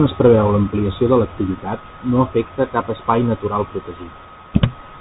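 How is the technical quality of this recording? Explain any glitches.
The quality is poor: the speech has been through a narrowband headset link for its whole length. A Bluetooth CVSD headset codec is active from start to finish. It codes each sample as a single up-or-down bit with an adapting step, which fits a 64 kbps link, and nothing above about 3.8 kHz survives. The speech sounds muffled and boxy, with plainly audible codec damage: a granular hiss underneath, scratchy s sounds, and distortion where loud, bright sounds outrun the step size.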